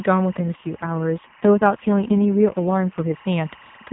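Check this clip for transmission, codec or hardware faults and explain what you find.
Two faults are present: timecode bleed running under the whole clip, and an AMR rate drop across most of the middle.

Timecode bleed, throughout: a chirping warble sits behind the speech for the entire clip, at about 25 dB below it. Linear timecode from an adjacent track or cable has leaked into the audio path. The code is a square wave that flips between tones near 1 kHz and 2 kHz, and its pattern repeats in a way that fits 24-frame timecode. The result is a steady, rhythmic chatter under everything.

AMR rate drop, 0.38 to 3.17 s: the speech turns rougher, buzzier and more synthetic, then recovers. This is the mobile link telling the AMR narrowband codec to cut its speech bitrate and spend the freed bits on error protection, likely because of a weak radio connection. The sound points to a step down from the 12.2 kbps mode, which is audible as lightly coded narrowband speech outside this span, to the 4.75 kbps mode. 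There is no gap and the band stays the same.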